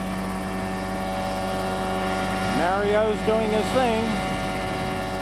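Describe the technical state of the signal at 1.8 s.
At 1.8 s the signal carries mains hum, present across the whole clip rather than just at that moment. Power-line current coupling in through a ground loop or a nearby transformer adds a steady 50 Hz tone sitting roughly 10 dB below the wanted sound.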